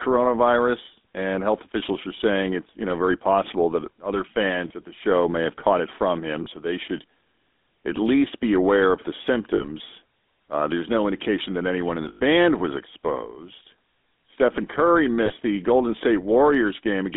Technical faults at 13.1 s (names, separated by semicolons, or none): GSM full-rate codec